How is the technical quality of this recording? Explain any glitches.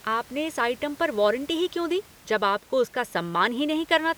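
Nothing's glitching here at all, just a bit of ordinary room noise sitting about 26 dB under the speech, which is simply the space the microphone was in.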